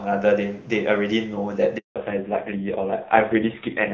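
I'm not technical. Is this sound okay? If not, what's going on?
No. At 1.78 s the speech suddenly fades out and there is silence until 1.96 s, a gap of about a fifth of a second. This is a handover gap: the phone switched the call from one network to another, and during the switch no speech reached the other end. Whatever was said in that moment is simply missing.

From 1.96 s to the end, the speech sounds duller, muffled and rougher compared with the clear start of the clip. This is a fallback to narrowband: after the switch, the call dropped from HD Voice to an older, lower-quality phone codec. That codec can't carry anything above 4 kHz, so the crisp, airy part of the sound is gone, and the rest is squeezed into far less data.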